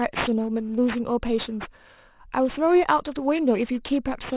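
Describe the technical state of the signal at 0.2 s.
At 0.2 s the speech carries aliasing, which runs through the whole clip rather than starting there. The sound points to a drop from 24 kHz to 8 kHz without an anti-alias filter, so energy above 4 kHz folds back below it as false, unrelated tones roughly 15 dB under the signal. Sibilants turn gritty and metallic. Plain band-limiting would only dull the top; here new wrong content crowds up against the 4 kHz edge.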